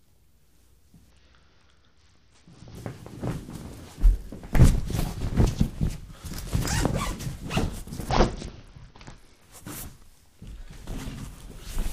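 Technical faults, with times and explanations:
1.10–2.77 s and 8.09–9.42 s: Bluetooth SBC bit pool drop. The link starved, so the top sub-bands lost their bits. The treble dulls and grit rises, which fits a rate near 72 kbps.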